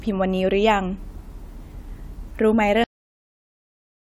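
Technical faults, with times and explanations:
2.84 s to the end: cut-off end. The speech stops dead at 2.84 s, partway through a sound. There is no decay, only digital silence for the remaining 1.2 s. The last buffers were never written, so playback runs out of data.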